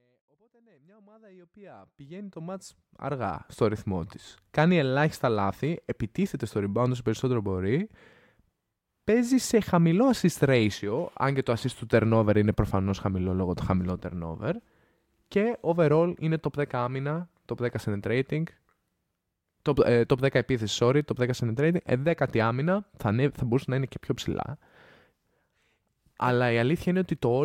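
Listening through the speech, nothing stood out as a technical problem, and the gentle fade-in over the first 3.5 seconds or so sounds like an ordinary editing choice.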